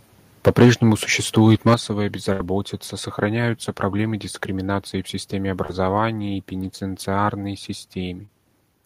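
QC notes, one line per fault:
0.46–0.71 s and 1.67–1.74 s, microphone overload: the input gain was likely set too high, so the peaks run into the converter's ceiling, about 9 dB over in the first stretch and about 4 dB over in the second. Roughly a seventh and then about a tenth of the samples are flattened at the limit. The cut-off waveform tops add a harsh, crackly grit to the loudest moments.
0.48 s, 1.74 s and 5.98 s, microphone volume stepped down: the input level was lowered in single abrupt steps, likely by the call software's automatic gain control reacting to the hot signal. The drops are about 3 dB, about 8 dB and about 1 dB. The first two land inside or just after the clipped peaks. The whole signal, background included, suddenly sits lower, most noticeably after the 8 dB step.
2.32–2.41 s, burst of packet loss: a run of about 70 ms of audio failed to arrive in time to be played. 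The receiver bridged the gap with 72 ms of synthesised continuation that fades as it goes. The result is a held, dying buzz or hiss. Then the sound jumps ahead, and the missing stretch is simply gone.
5.66–5.70 s, 6.59–6.65 s and 8.25–8.29 s, short concealed packet loss: brief holes of about 30 ms, 10 ms and 30 ms reached the decoder too late. The receiver patched each one by extending the preceding sound and then crossfading back into the real signal. At 6.6 s a further 10 ms was dropped outright. Each patch is heard as a quick smear or wobble, and a short consonant-like sound may vanish.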